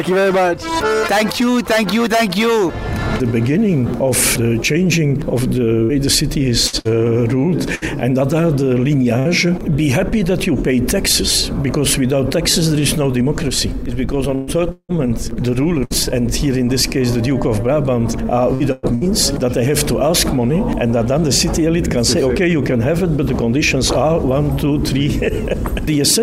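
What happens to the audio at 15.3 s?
Repeated packet loss (robotic sound) from 14.35 to 15.93 s: three gaps, the longest 173 ms, are patched by stretching the last sound, giving choppy audio. Spectrograms show smeared, repeated blocks.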